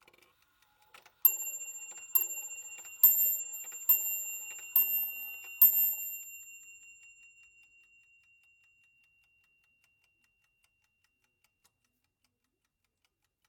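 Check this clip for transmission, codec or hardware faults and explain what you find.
Two short patches of AAC frame loss with concealment occur, at 3.40 to 3.53 s and at 10.77 to 10.82 s. Each missing stretch lasts about 43 ms, which fits a single lost frame. The decoder rebuilt each gap from the last good spectrum, so the audio turns briefly smeared and phasey rather than silent. That filled-in texture is what separates it from a plain dropout, which would leave a hard gap.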